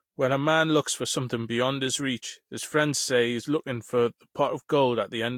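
From start to finish the speech sounds swirly, smeared and hollow, with blurred consonant attacks and nothing above 18.6 kHz. The likely cause is generation loss: a few successive lossy passes, fitting Vorbis near 70 to 75 kbit/s, each adding fresh quantisation damage.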